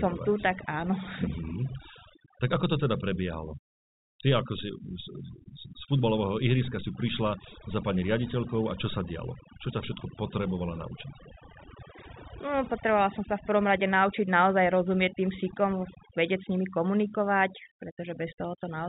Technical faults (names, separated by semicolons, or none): overdone noise removal